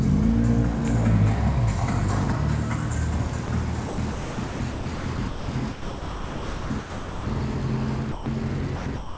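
At 3.46 s the sound drops out for an instant, replaced by a flat, steady hiss: sound dropped by the voice detector, likely because the sender's detector judged that moment to be background and briefly stopped transmitting, leaving the receiver to fill the gap with comfort noise. From 3.88 to 7.26 s the sound is chopped by the voice detector, likely from the sender switching transmission on and off repeatedly. About 2.4 s of that stretch is swapped for synthetic noise, so the audio turns choppy. From 8.12 to 8.26 s a second sound drop leaves a 140 ms gap of steady noise, likely the detector again mistaking live sound for background before retriggering. From 8.76 s to the end, the sound is chopped by the voice detector once more, likely the same on-off gating, with about 0.32 s replaced by comfort noise. Throughout, nothing is heard above 8 kHz, which fits a G.722 call path at 64 kbps.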